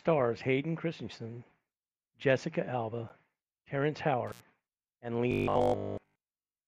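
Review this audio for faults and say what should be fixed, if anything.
At 4.27 to 4.43 s the speech drops out with crackle at both edges, leaving a gap of about 81 ms filled by faint hiss. That is intermittent contact: a loose plug or cable briefly opening the signal path. Reseat or replace the connector and secure the cable so it can't flex.

From 5.32 s to the end at 6.67 s the speech turns into a rigid, metallic 50 Hz buzz that still roughly tracks the words. This is robotic sound from repeated short buffers, likely caused by audio arriving too seldom, so about 20 ms chunks are looped in place of real audio for most of that stretch. Use a larger buffer or lighten the processing load so new audio arrives on time.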